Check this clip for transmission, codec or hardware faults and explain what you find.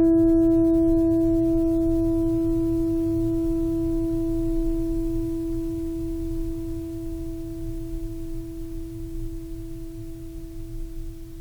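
Listening through this music clip, nothing stood out as a fault.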